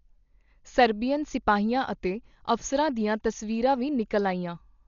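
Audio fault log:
Throughout, Dolby Digital compression: the speech sounds dull and muffled, with nothing above 7 kHz and rough, fluttering noise around voiced sounds. The likely cause is a heavily starved encode, which fits about 40 kbps, narrowing the band and filling unfunded lines with dither noise.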